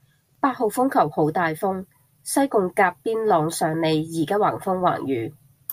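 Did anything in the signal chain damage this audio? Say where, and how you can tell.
No, nothing in the signal chain audibly damages this speech recording. No stage between capture and playback leaves a mark that can be heard.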